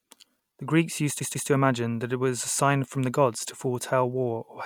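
At 1.19 s the speech hits a stutter from repeated frames: a roughly 144 ms chunk of compressed audio gets played twice more, through 1.48 s. That adds 288 ms, which fits a short run of codec frames being duplicated.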